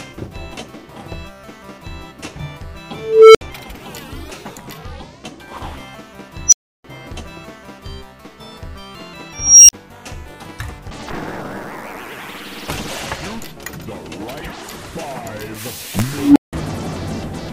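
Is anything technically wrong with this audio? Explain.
Yes, there are four bursts from an unstable filter, at 2.93–3.41 s, 6.47–6.84 s, 9.30–9.73 s and 16.07–16.53 s. A recursive filter with bad coefficients feeds back on itself and grows, producing a low tone near 400 Hz at 2.93 s and near 300 Hz at 16.07 s, and a high squeal near 5 kHz at the other two. Each swells until it clips and then drops to silence. The build-ups last 0.41 s, 0.06 s, 0.39 s and 0.29 s, followed by gaps of 64, 320, 43 and 171 ms. Acoustic feedback howl also grows as a tone, but it never ends in that abrupt dead silence.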